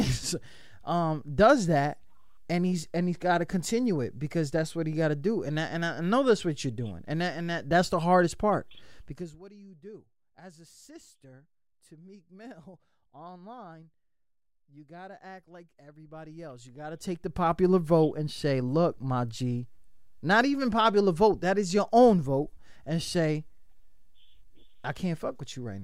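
A speech recording with zipper noise from 9.05 to 9.41 s: the level drops by roughly 25 dB in unsmoothed 1 dB steps, about a hundred per second, so each step clicks and the fade buzzes audibly.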